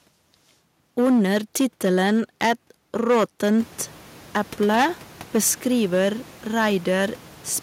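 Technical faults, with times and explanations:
Throughout, hard clipping: the speech is driven about 9 dB past what the signal path can pass, so roughly one sample in twenty is sheared off flat. On a waveform the louder syllables show flat-topped plateaus. On a spectrogram each loud syllable sprays energy far up past the normal speech harmonics. This is heard as distortion on the loudest parts of the speech. The room noise, which rises about 22 dB around three and a half seconds, sits beneath it.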